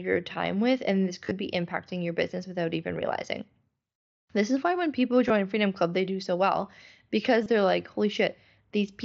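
Concealed Bluetooth headset packet loss strikes four times in this speech. At 1.25 to 1.31 s, between "time with and this" and "be impacting your business", about 45 ms of audio is lost in short gaps across 60 ms. The longest gap is 15 ms. The receiver fills each gap by repeating the best-matching recent stretch of waveform. At 3.23 s, after "your business without even", a single 7.5 ms gap is nearly hidden. A 15 ms gap follows at 5.28 s, after "is why when people". A 22.5 ms gap comes at 7.44 to 7.46 s. All of it passes through the mSBC headset codec, capped at 8 kHz.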